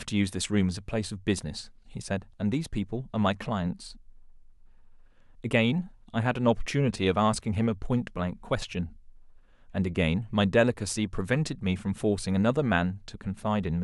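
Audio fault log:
No fault found in the audio.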